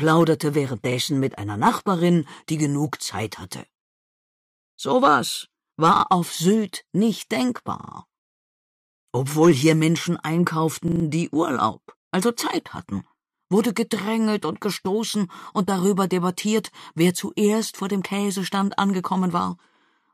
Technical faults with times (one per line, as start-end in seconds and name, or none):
0.92-0.96 repeated buffer
5.96-6.04 repeated buffer
7.80-7.92 repeated buffer
10.88-11.04 repeated buffer